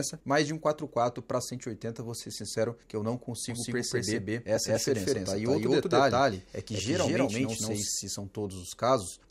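From 3.5 to 7.88 s, a doubled audio track: an equally loud copy trails by about a fifth of a second, likely from a second capture path. Unlike an echo, it has no decay and starts and stops abruptly.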